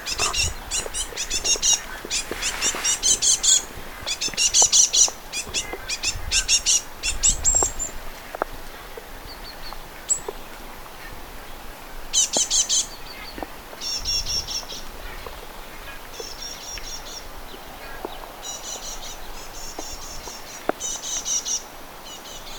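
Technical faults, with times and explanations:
No technical faults can be heard, so there are no times or explanations to give.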